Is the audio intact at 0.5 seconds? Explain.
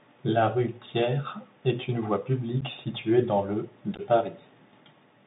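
No. At 0.5 seconds the speech is carrying Bluetooth CVSD headset codec damage, present throughout the clip. CVSD tracks the waveform with one bit per sample, each bit nudging the level up or down by an adaptive step, at a rate that fits a 64 kbps link. The line is held to roughly 150 Hz to 3.7 kHz, so the speech sounds boxed in. Fast loud rises outrun the step and distort, s sounds turn scratchy, and granular hiss sits underneath.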